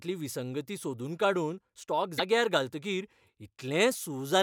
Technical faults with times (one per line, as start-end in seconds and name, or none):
2.15-2.20 damaged data in a compressed stream